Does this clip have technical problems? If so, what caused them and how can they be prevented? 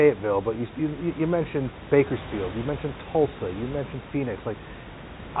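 No, the speech signal shows no technical faults, with its content limited to the telephone band below about 3.8 kHz and the room's background sitting about 14 dB under the speech as part of the recording.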